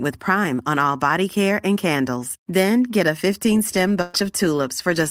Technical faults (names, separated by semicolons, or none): burst of packet loss